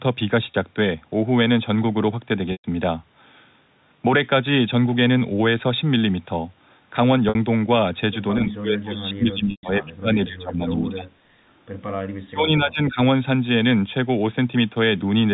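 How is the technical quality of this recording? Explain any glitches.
The recording has two kinds of glitch: four brief dropouts and two stretches where the speech sinks sharply, all heard through narrowband G.711 telephone coding.

Packet loss with pitch repetition occurs at 0.51 s (30 ms), 7.29 s (60 ms), 2.52 s (120 ms) and 9.51 s (120 ms). When audio packets failed to arrive, the receiver filled each gap by looping the last pitch period. The 30 ms gap sounds like a slightly held, buzzy tone. The two 120 ms gaps run past the roughly 50 ms fade, so the sound decays into silence before the speech cross-fades back in.

Speech suppressed in double talk affects 8.4 to 11.1 s, with about two seconds affected in all, and 12.21 to 12.99 s, with a bit under a second affected. The likely cause is an echo canceller that could not tell the near talker from loudspeaker echo while both sides spoke, so it attenuated everything. 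The speech dips by up to about 30 dB, losing its top end or dropping out in fragments.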